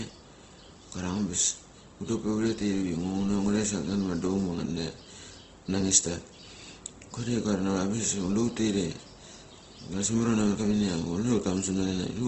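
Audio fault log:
Throughout, Opus compression: the speech sounds rough and grainy, with noisy texture filling bands rather than the swirling, watery holes of MP3, and nothing is present above 8.2 kHz. The likely cause is the encoder's music (CELT) mode running short of bits at a wideband setting, which fits a rate near 16 kbps; it keeps each band's energy but substitutes folded or noise-like content for the detail it cannot afford.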